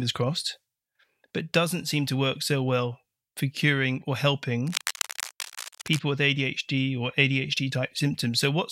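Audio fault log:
4.66–5.99 s, cable scratch noise: just after "well for curing or", ragged crackling bursts sit about 10 dB below the speech, likely a worn connector shifting contact, uneven unlike steady hiss.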